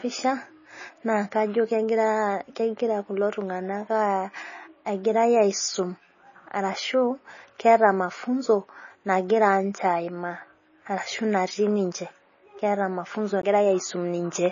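Throughout this speech recording the sound is watery and swirly, with the treble gone: nothing reaches above 7.1 kHz. The damage is plainly audible and is likely MP3 compression at a very low bitrate, around 24 kbps, where the encoder drops the top band and lets weak frequency lines flicker between frames. At 13.42 s a CD skip makes a short gap: the laser jumps to another turn of the disc's spiral, and the audio mutes for a split second before resuming from a different point.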